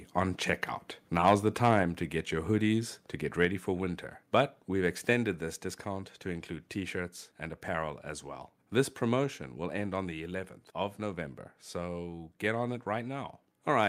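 Right after "on checkout", from 1.27 to 1.34 s, there's a short burst of microphone overload: the loudest part of the speech pushes about 4 dB past what the converter can take, so the tops of the peaks get sheared flat on a few percent of samples. You hear it as a gritty, crackly edge on that syllable, most likely from the mic input being set too hot.

After that the level drops in steps, which sounds like microphone volume stepped down by the call software reacting to the overload. At 1.83 s, just before "to get your hoodies", everything falls by about 3 dB at once, voice and background together. It happens again at 3.45 s between "your hoodies to get" and "for winter", and a third time at 5.13 s, each another drop of about 3 dB. The speech ends up noticeably quieter than at the start.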